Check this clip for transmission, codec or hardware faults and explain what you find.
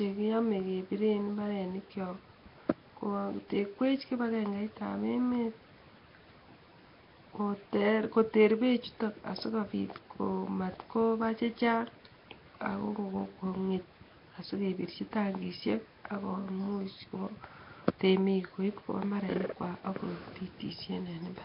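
One fault runs through the whole clip: heavy damage that likely comes from Nellymoser compression. With a fixed bit budget per block, weak bands get noise instead of signal, so the speech sounds hissy and underwater. A spectrogram shows nothing above 5.3 kHz and grainy noise filling the gaps.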